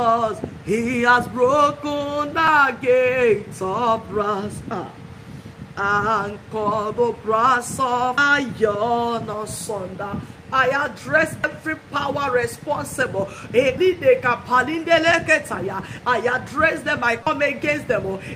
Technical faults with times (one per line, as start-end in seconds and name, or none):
2.45-2.48 damaged data in a compressed stream
8.17 damaged data in a compressed stream
11.44 damaged data in a compressed stream
13.77 damaged data in a compressed stream
17.23-17.27 damaged data in a compressed stream